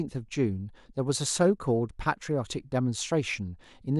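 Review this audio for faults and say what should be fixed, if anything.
Nothing should be fixed, as no faults turn up in this audio.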